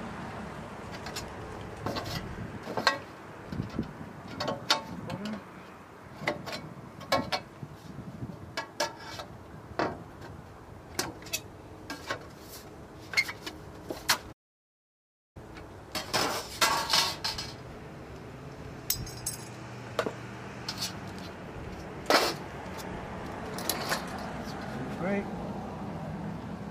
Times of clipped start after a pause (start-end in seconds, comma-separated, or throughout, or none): none